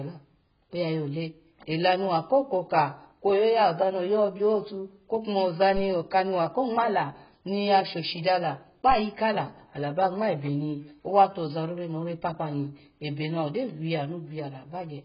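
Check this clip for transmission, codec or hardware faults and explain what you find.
One codec fault runs throughout. Throughout, nothing sounds above 5.1 kHz, leaving the speech dull, smeared and warbly. The likely cause is AAC compression at roughly 12 kbps, which discards upper bands. A spectrogram shows a flat ceiling at 5.1 kHz.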